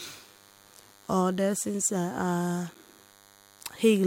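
Throughout the speech runs a DECT cordless phone buzz: radio bursts every 10 ms, rectified into a thin, harmonic-rich 100 Hz buzz, well below the speech, unlike smoother mains hum.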